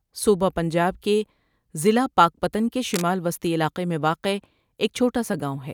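A worn cable or connector was likely being moved, so its contact resistance jumped about rapidly. From 2.88 to 3.04 s, just after "ضلع پاکپتن کے", cable scratch noise adds dense, uneven scratching bursts, roughly 10 dB below the speech.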